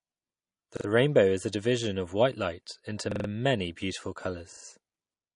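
Throughout the speech, the treble stops dead at 10.6 kHz and the upper bands sound watery and swirly. This is likely MP3 compression at a low bitrate, something near 40 kbps. On a spectrogram there is a flat ceiling, with speckled patches blinking on and off beneath it.

At 0.77–0.85 s, 3.12–3.29 s and 4.52–4.65 s, a repeated buffer stutters: the same 43 ms slice, which fits a 2048-sample buffer, plays two, four and three extra times. Little audio goes missing. The waveform shows identical blocks tiled with hard edges.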